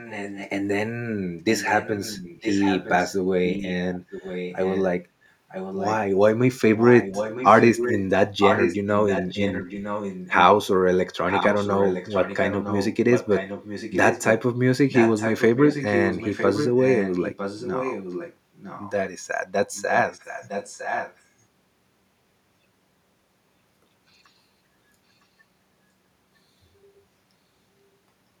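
Echo leak at 0.0–0.5, 1.45–4.85, 5.49–5.95, 6.77–10.45, 11.28–18.91 and 19.74–21.21 s: a copy of the speech trails it by 0.96 s, loudest around 6.8–10.5 s. It's likely a speakerphone whose echo canceller let some pickup through.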